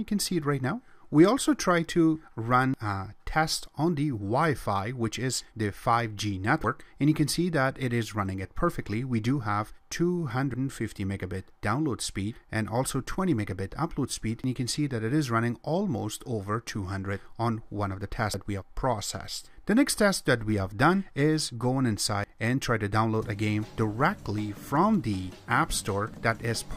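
At 2.74, 6.64, 10.54, 14.44, 18.34, 22.24 and 26.14 s, the sound skips forward by about a tenth of a second with no silent gap. These are likely audio missing between chunks at 4 s boundaries. The even spacing and seamless joins set them apart from random dropouts.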